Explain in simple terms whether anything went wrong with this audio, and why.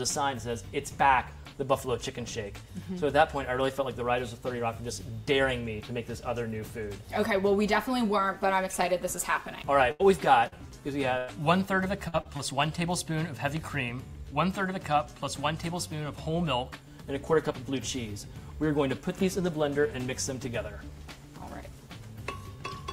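Something did go wrong, in a cluster between about 10 and 12.4 seconds. Parts of the audio were lost in transit, and the receiver had to cover the holes.

The biggest problem is a burst of packet loss, heard three times. At 9.91 to 10.01 s, 11.18 to 11.30 s and 12.08 to 12.15 s, a run of audio failed to arrive. Between 60 and 100 milliseconds went missing each time. The receiver stretched out the last sound it had and faded it, so you hear a brief held buzz or hiss. Then the audio jumps ahead. The part that was lost is simply gone.

There are also three short concealed packet losses. They come at 10.47 to 10.54 s, 12.21 to 12.27 s and 12.37 to 12.41 s. Each is a tiny gap of 20 to 40 milliseconds. The receiver patched it by continuing the sound just before it, then blended back in. These come across as a quick smear or wobble, and a very short sound may drop out.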